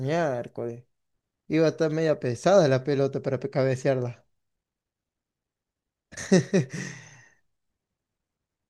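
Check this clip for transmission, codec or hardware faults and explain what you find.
Nothing wrong turns up anywhere in this speech recording.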